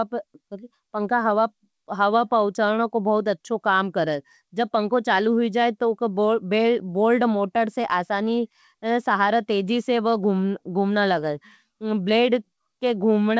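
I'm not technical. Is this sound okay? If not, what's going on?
Yes, this speech sounds fine; no problems stand out.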